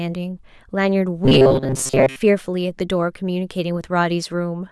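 From 1.25 to 2.16 s the speech turns into a stiff, metallic buzz locked at a steady 133 Hz, still tracing the rough shape of the talking. This is robotic sound from repeated short buffers: most of that stretch is likely a fragment of about 7.5 ms played over and over because fresh audio arrived too slowly, so the real material in between was skipped and the loop imposed its own buzz.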